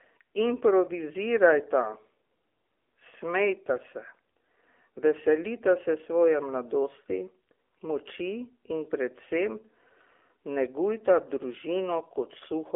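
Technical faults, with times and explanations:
Throughout: AMR narrowband mobile codec. Nothing above 3.7 kHz survives, and the 300 Hz to 3.5 kHz line band thins the low end. Plainly audible buzzy, synthetic coloration from pulse-driven vocal-tract modelling fits a low AMR-NB mode around 7.4 kbps.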